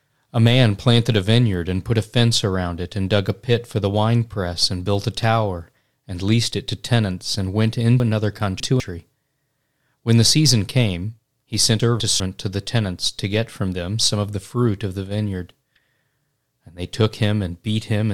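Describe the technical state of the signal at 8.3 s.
At 8.3 s the stream has chunks out of order, spanning 8.0 to 8.8 s: one 200 ms chunk arrived late and plays three chunks behind its place. Just after "to tenants and went", the speech sounds jumbled, with three hard joins.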